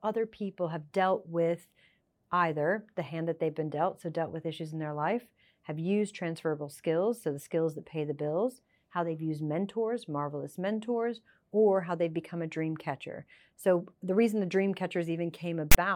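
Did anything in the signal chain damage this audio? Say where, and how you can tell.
Yes. The damage comes from storage and playback: file tags played as audio. From 15.72 to 15.75 s, near the end of the clip, a 38 ms burst of hard-edged rasp appears, lopsided to one side of zero, and then drops into silence. A tag block of text bytes, followed by zero padding, was decoded as samples. The offset rasp and hard edges set it apart from a codec glitch or a network dropout.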